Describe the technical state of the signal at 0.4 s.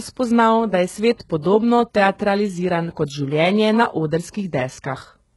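At 0.4 s the speech carries heavy damage that runs through the whole clip. It sounds like HE-AAC compression, likely at a very low bitrate around 12 kbps. The codec keeps only the lower spectrum and fakes the treble by copying lower bands upward under a coarse envelope. The top stays bright but false. Its harmonics do not line up, so s sounds turn gritty and lispy. Nothing is left above 11.5 kHz.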